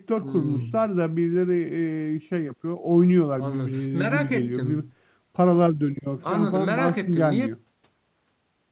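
Nothing stood out on listening; the speech arrives over the call path as expected for a G.711 line, with nothing heard above 4 kHz.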